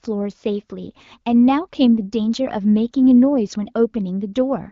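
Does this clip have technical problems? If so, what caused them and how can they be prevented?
No, there is nothing to fix or prevent: the speech carries the ordinary signature of an AMR wideband (HD Voice) path, with nothing above about 7.5 kHz and only the light coding texture that fits a rate around 15.85 kbit/s.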